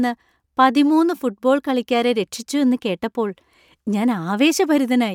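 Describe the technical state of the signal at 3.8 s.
At 3.8 s the speech signal is intact, with no dropout, clipping, distortion or other fault audible at that moment.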